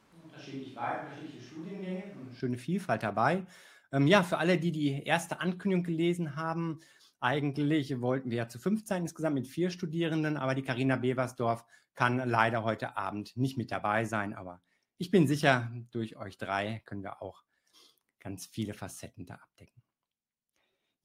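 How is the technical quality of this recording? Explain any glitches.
The recording has one fault, at the very start. From the opening until 2.4 s, the speech sounds roomy and hollow, with less bass, about 10 dB quieter, and with background noise around 25 dB below the speech. It then cuts suddenly to a closer sound. This is likely a switch to a distant microphone, where the close microphone's feed was missing and a farther one picked up more of the room.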